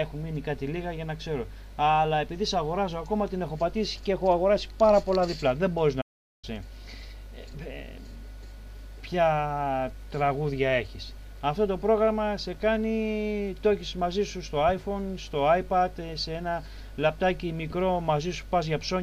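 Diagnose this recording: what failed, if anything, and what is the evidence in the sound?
A playback stall, most likely at the playback stage: the sound halts mid-flow from 6.01 to 6.45 s, a silence of about 0.42 s, before continuing. Its length sets it apart from a short buffer-underrun dropout, which lasts milliseconds rather than nearly half a second.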